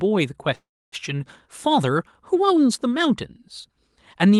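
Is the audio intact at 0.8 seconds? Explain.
No. At 0.8 s the audio is inside a call audio freeze running from 0.55 to 1.01 s. The sound just before the stall is stretched into a fading buzz, then drops to silence for about 0.28 s of the roughly 0.37 s filled span. The likely cause is packets held up in transit, draining the jitter buffer. Nothing is lost. The audio resumes where it stopped, about 0.37 s later than it should.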